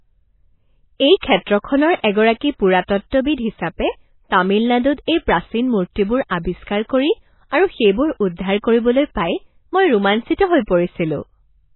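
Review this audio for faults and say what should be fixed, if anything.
Throughout the speech the sound is dull and watery, with nothing above 4 kHz and a swirly, metallic edge on s sounds. The likely cause is heavy MP3 compression: starved of bits, the encoder cut the treble and switched weak frequency lines on and off, which fits a bitrate around 16 kbps. Encoding at a much higher bitrate, or keeping a lossless master, would prevent it.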